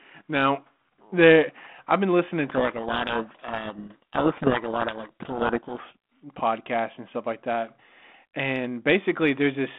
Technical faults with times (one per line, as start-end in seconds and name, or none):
2.44-5.81 codec payload misread